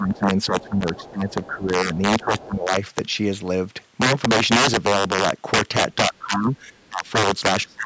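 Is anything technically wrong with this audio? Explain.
Yes, there are three kinds of fault in this speech.

Integer overflow runs through the whole clip. The loudest peaks are driven about 11 dB past full scale, and only a small fraction of samples cross the limit. Instead of being held at the ceiling, those samples wrap to the opposite extreme. On the waveform, peaks jump abruptly from top to bottom rail. On a spectrogram, they show as thin vertical broadband streaks. By ear they are harsh cracks on loud syllables, far sharper than clipping.

Speech suppressed in double talk affects 0 to 2.7 s, 6.09 to 7.15 s and 7.65 s to the end. The talker's level sinks in patches, by around 15 dB, 20 dB and 30 dB respectively. This was likely an echo canceller turning everything down when both sides spoke at once. The waveform envelope shows sudden hollows. The spectrogram shows speech energy fading in uneven blocks. 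The talker's voice dips in patches.

The other side's voice leaking through is heard at 0.15 to 0.19 s, 0.6 to 1.48 s and 1.95 to 2.45 s. It sits roughly 20 to 25 dB below the main talker, most likely residual loudspeaker echo the canceller missed. On a spectrogram it appears as a faint second set of harmonics under the main speech, within the call band's normal cutoff near 8 kHz. It sounds like a faint second voice.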